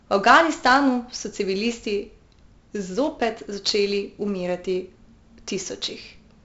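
Throughout, 4-bit ADPCM compression leaves heavy gritty hiss riding every loud syllable, with distortion on sharp onsets and nothing above 7.7 kHz, which points to a 64 kbps, 16 kHz stream.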